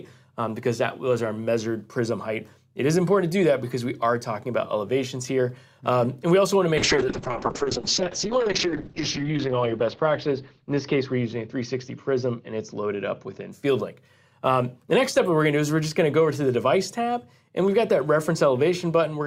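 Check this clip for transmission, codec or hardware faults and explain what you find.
There is one fault, a call bitrate drop from 6.78 to 13.57 s. The encoder's rate falls from what sounds like about 128 kbps to roughly 6 kbps, bottoming out for about 2 s. Coarser coding and a bandwidth cut from 20 kHz to 8 kHz make the audio rough and muffled.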